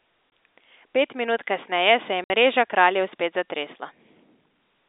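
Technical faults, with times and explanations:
0.30 s: packet loss filled with silence, a 20 ms hole with hard edges, one packet dropped and filled with silence, unlike a smoothed concealment gap.
2.24 to 2.30 s: packet loss filled with silence, a 60 ms hole, three times the first, which fits three consecutive 20 ms packets lost rather than a random dropout.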